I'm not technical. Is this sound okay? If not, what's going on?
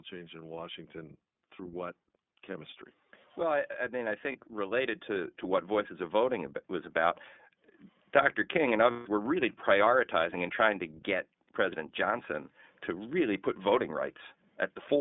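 No. The whole recording has passed through the iLBC codec, an old internet-phone voice format. It cuts off everything above about 3.6 kHz, so the speech sounds muffled and slightly rough and synthetic. Unlike plain muffling, that gritty, artificial edge stays throughout.

From 0.09 to 7.24 s, automatic gain rising makes the sound swell steadily louder. The call software judged the input too quiet and kept turning it up. The voice and any background noise grow together, slowly, rather than jumping in one step.

There are also lost iLBC frames, where pieces of the audio went missing in transit and the decoder filled the holes. The first, at 4.32 to 4.36 s, is a tiny blip. The second, at 8.91 to 9.07 s, just before "were really prioritizing and", is a brief held, buzzy hum. Clean speech resumes immediately afterwards, which sets these apart from a connection that garbles for a while.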